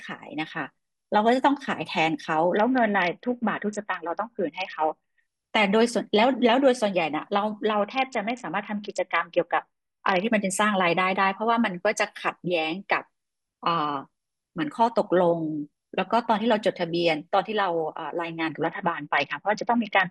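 A congested Bluetooth link in this speech clip forces three SBC bit pool drops, at 2.57–5.20 s, 7.73–10.23 s and 18.66 s to the end. Each time the encoder starves the upper sub-bands and quantises the rest coarsely, so the treble goes dull and a gritty noise rides on the speech until full quality returns. The depth of the loss fits a bit pool falling from 31 to about 6, near 55 kbps.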